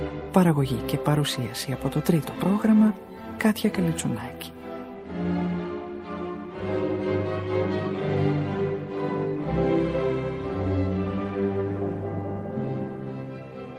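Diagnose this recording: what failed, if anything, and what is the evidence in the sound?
Nothing in the recording points to a failure at any stage of the chain. No audible event marks a point where the signal path broke down.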